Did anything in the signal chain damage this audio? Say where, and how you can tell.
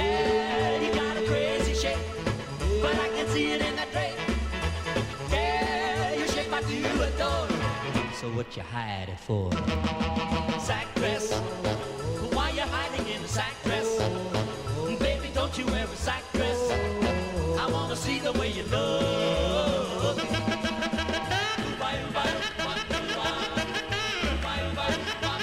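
Yes. There are two bit error spikes, at 9.75 s and 25.13 s. Each is a single sharp tick, one sample long, reaching about -28 dBFS. The ticks are broadband and have no relation to the surrounding sound. That points to a digital fault in memory, storage or a digital link, not the analogue side. One bit flipped in one sample. The value jumped by a power of two and came straight back on the next sample.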